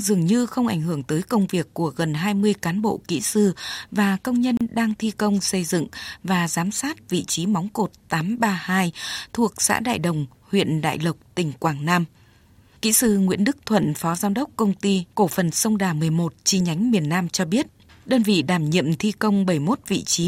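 A gap at a join of encoded pieces runs from 4.57 to 4.61 s, between "kỹ sư và công" and "đang thi công xây". The pieces were joined untrimmed, so encoder start delay and end padding leave about 35 ms of silence with smeared edges before the speech resumes.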